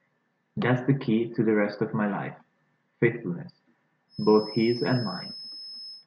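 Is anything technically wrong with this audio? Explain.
Yes. From 4.07 s to the end of this speech clip, a feedback whistle sits behind the voice. It is a thin, steady tone at 5.2 kHz. It stays about 15 dB below the speech and swells and fades slowly in level. The likely cause is a loudspeaker feeding back into the microphone. The loop hovers right at the edge of feedback. One high frequency keeps ringing, but it never grows into a howl.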